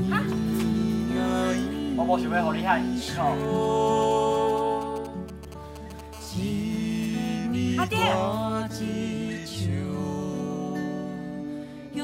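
The audio carries GSM signalling bursts from 3.4 to 6.0 s, a galloping pattern of ticks and short buzzes roughly 20 dB below the program, showing as clustered vertical stripes on a spectrogram. From 6.13 to 7.36 s a steady GSM phone buzz follows at about -24 dB, a raspy 217 Hz tone whose harmonic ladder and regular pulse train appear on the spectrogram and waveform. Both come from a nearby 2G phone whose radio pulses were rectified by the audio circuitry, first while signalling and then during a call.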